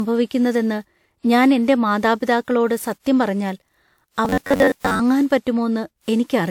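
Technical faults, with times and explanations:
Throughout: generation loss. The speech sounds swirly, smeared and hollow, with blurred consonant attacks and a top end that stops near 20.1 kHz. That cut-off suggests a decent bitrate, around 128 kbit/s WMA, so the damage is heavier than one encode would leave. The likely cause is the speech being decoded and re-encoded several times. Each pass quantises on a shifted frame grid, so the noise and spectral holes pile up. Single-pass low-bitrate coding would instead lose more high end and keep its artefacts steadier.
4.25 to 5.00 s: robotic sound from repeated short buffers. For about three quarters of a second, the speech turns into a rigid metallic buzz at 93.8 Hz that only loosely tracks the syllables. A fixed pitch like that points to the latest chunk of roughly 10.7 ms being replayed again and again while most of the new audio is skipped. 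This likely comes from audio arriving too slowly and the gaps being filled with repeats. Ordinary dropouts would leave silences or clicks rather than a steady tone.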